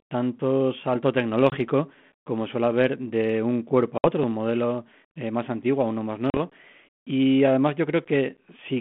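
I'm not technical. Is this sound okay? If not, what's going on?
No, not quite. It's a phone-style call with a couple of problems.

The first is packet loss on an ADPCM call. Small chunks of the audio never arrived and were replaced by silence: about 20 ms at 1.5 s, right after "tanto salto"; about 60 ms at 3.98 s, after "haber de un cuerpo"; and about 40 ms at 6.3 s. Because this phone codec predicts each bit of sound from the last, the speech comes back after each gap a little off, with a click or slight roughness, before it settles.

The second is a repeated buffer at 4.24 s, just before "de un modelo eh". A fresh slice of audio was late, so the device replayed its last tiny piece, only about 5 ms long, which you'd hear as a quick click rather than a real stutter.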